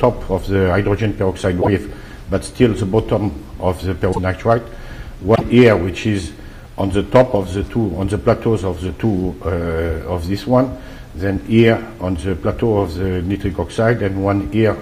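The audio jumps ahead three times, at 1.61, 4.12 and 5.34 s. Each jump leaves a 70 ms burst of chirpy noise or a brief hole. The likely cause is a broken MP3 bit reservoir. After dropped 26.1 ms frames, the next frames borrow the wrong bytes.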